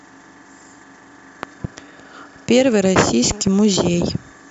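A sudden voltage step or pulse, likely from a plug, switch, static or driver glitch, breaks into the speech twice as a loud pop. From 1.43 to 1.67 s a pair of sharp pops jumps about 10 dB above the speech. A second pair, from 3.31 to 3.50 s, is lighter, about 5 dB above it. Each time the speech continues underneath the thumps.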